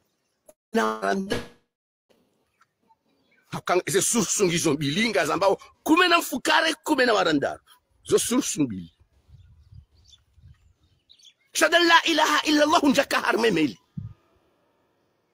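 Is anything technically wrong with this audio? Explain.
Yes. Between 0.49 and 0.75 s, 0.84 and 1.10 s, and 1.32 and 2.12 s the sound stretches into a fading buzz or hiss, then silence at the first and last, and jumps ahead: likely a long network dropout each time.

At 1.21 to 1.29 s a burst of packet loss drops about 60 ms. The receiver holds and fades the last sound, then resumes further on.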